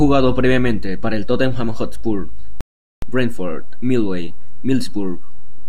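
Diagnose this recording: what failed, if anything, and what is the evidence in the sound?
The converter stage shows a DC offset throughout: the waveform sits shifted from zero, costing headroom and leaving steady energy at the very bottom of the spectrum.

A rebuffering stall at playback silences the speech from 2.61 to 3.02 s, then resumes exactly where it stopped, adding 416 ms without losing any audio.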